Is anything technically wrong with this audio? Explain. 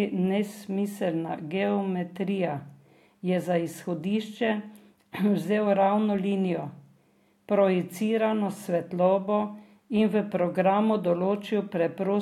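No, nothing is technically wrong with this speech recording. No technical problem can be heard anywhere in it.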